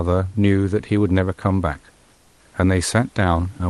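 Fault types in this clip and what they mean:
Comfort noise in place of the background: from 2.15 to 2.39 s, roughly 240 ms, the quiet room background turns flat and featureless and dips about 2 dB, likely because the sender stopped transmitting in the pause and the receiver filled in synthetic noise.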